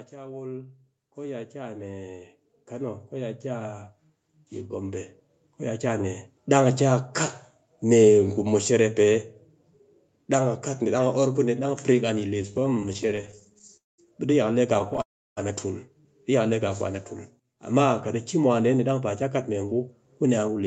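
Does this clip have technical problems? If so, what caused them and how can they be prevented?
Yes. Automatic gain rising runs from 0.1 s to 6.11 s: the gain control judged the input too quiet and lifted its level step by step by about 18 dB over those six seconds, so the speech and the background noise swell up together rather than the level being steady from the start. Prevention: set the microphone input level correctly beforehand, or use a gain control with a sensible starting gain so it doesn't need to climb.

Repeated stalls (stutter) occur from 12.37 s to 13.75 s and again from 14.74 s to 15.00 s. Packets kept arriving late, so the jitter buffer emptied over and over: 30 brief gaps in the first stretch, the longest 19 ms, and 6 in the second, the longest 11 ms. Each was bridged by extending the last sound, covering about a fifth of each stretch, so the speech drags and stutters with nothing lost. 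Prevention: improve network stability or let the jitter buffer hold a little more audio.

A call audio freeze follows each stutter, at 13.77–14.00 s and 15.02–15.39 s. The sound is held briefly, then drops to near-silence for about 0.19 s and about 0.33 s respectively, before resuming exactly where it stopped. Each pause adds 0.21 s and 0.35 s of delay, and nothing is skipped. The likely cause is packets held up in transit while the jitter buffer ran dry. Prevention: use a more reliable connection and prioritise call traffic on the network.

Jitter buffer speed-up runs from 19.22 s to 20.63 s. The buffer held more audio than it targets, so the receiver trimmed many tiny pitch-period slices, roughly a tenth of a second in all. Playback runs at about 107% speed with unchanged pitch, which makes this stretch sound hurried. Prevention: reduce the network delay spikes that fill the buffer, or let it drain its excess more gradually. 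Across the clip, the call codec path cuts off everything above 8 kHz.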